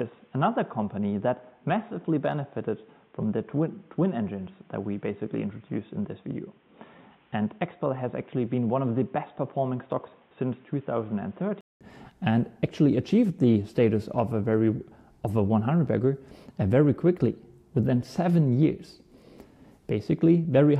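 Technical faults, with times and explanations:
0.00–11.81 s, input switched to a poorer device: nothing above 3.8 kHz, dull and boxy, about 5 dB quieter, with a different noise floor roughly 40 dB down. A 200 ms gap at 11.81 s precedes fuller sound, likely a change of capture device.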